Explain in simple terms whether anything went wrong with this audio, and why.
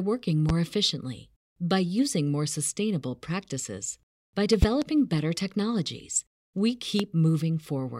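Sharp, loud pops cut in on top of the speech at 0.49–0.52 s, just before "efficiently by using more"; at 4.62–4.85 s, a quick double pop between "more sustainable practices by" and "better technologies"; and at 7.00–7.03 s. These loud pops are likely sudden electrical jolts, perhaps from static or a switch, while the speech continues underneath.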